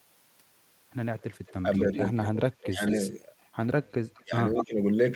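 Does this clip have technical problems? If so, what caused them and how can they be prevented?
Yes. An echo leak appears at 1.21 to 2.32 s, 2.87 to 3.11 s, 3.45 to 4.22 s and 4.55 to 4.65 s. A copy of the speech returns about 0.21 s late, usually faint but nearly as loud at 4.6 s. The likely cause is a far-end echo canceller that lets loudspeaker sound leak back. Better echo cancellation or a headset prevents it.

Speech suppressed in double talk occurs at 1.62 to 2.0 s, 2.6 to 2.82 s and 4.23 to 4.8 s. The speech dips slightly at first, then drops steeply in the later two spans. Likely cause: the canceller mistook overlapping talk for echo and attenuated it. Tuning its double-talk detection prevents this.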